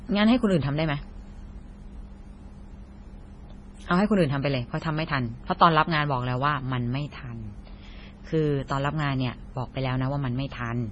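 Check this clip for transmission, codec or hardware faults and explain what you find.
One codec fault runs through the whole recording. MP3 compression is the likely cause: across the entire speech the treble stops dead at 10.5 kHz, and heavy watery, swirling artefacts smear the consonants. That fits a starved encoder at a very low bitrate, around 24 kbps, cutting the top band and zeroing weak frequency lines that flicker between frames. A plain low-pass filter would dull the sound without this swirl and chirp on s sounds.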